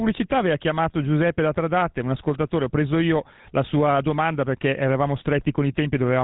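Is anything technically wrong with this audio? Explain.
Yes. Throughout, the speech carries GSM full-rate codec damage: the codec rebuilds the voice from a vocal-tract model driven by regularly spaced pulses, giving a buzzy, gravelly roughness, consistent with about 13 kbps, and nothing above 3.9 kHz. That buzz separates it from simple telephone band-limiting.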